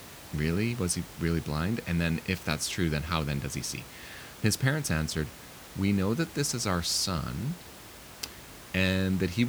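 Nothing in this speech goes wrong on the technical side, and the room noise underneath, sitting about 18 dB below the talking, is simply the space the microphone was in rather than anything the system added.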